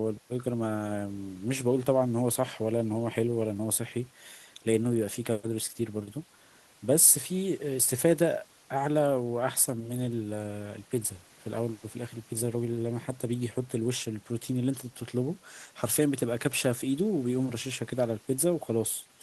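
No technical faults can be heard anywhere in the recording; the speech signal stays steady and intact throughout.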